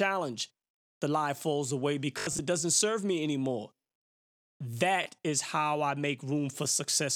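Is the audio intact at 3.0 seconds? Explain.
Yes, at 3.0 seconds the speech runs through intact, with no audible fault at that moment.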